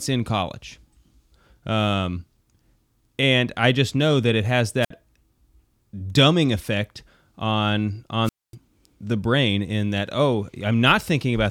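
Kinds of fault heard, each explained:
Wireless microphone squelch dropout: the radio link from an analogue FM mic fades and the receiver's squelch mutes the output, so you get a quick lift of hiss and then a gap. It happens twice here. At about 4.81 s, after "know that it has", there's a short hole of around 57 ms. At 8.24 s, after "dumbing effect on", the mute runs about 243 ms before the speech returns with "the brain in that".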